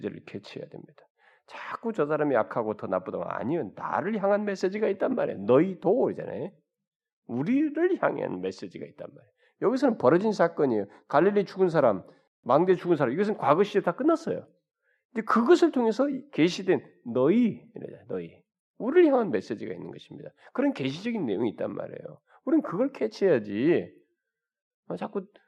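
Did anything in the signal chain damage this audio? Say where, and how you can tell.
No, nothing stood out on listening that would point to damage anywhere in the signal chain.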